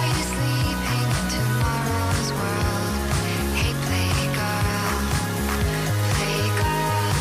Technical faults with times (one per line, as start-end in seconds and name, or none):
none